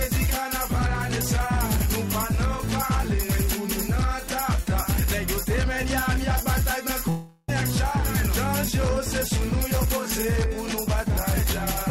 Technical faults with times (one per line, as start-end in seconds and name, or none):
7.09-7.50 long network dropout